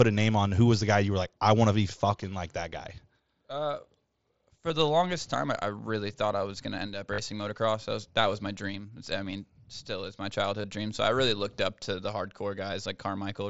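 Concealed Bluetooth headset packet loss hits at 4.68 s, 7.14 to 7.18 s and 10.62 to 10.64 s. Lost packets get patched with recycled waveform, so the longest gap buzzes briefly and warbles on recovery.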